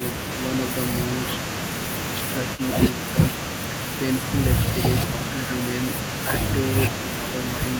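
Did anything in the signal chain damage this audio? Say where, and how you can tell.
Yes. From 2.56 to 2.61 s a faint copy of the speech returns about 240 ms late and roughly 20 dB down, likely an echo leak in call processing. A far-end canceller let loudspeaker pickup through. On a spectrogram, a weak, delayed repeat of earlier harmonics appears.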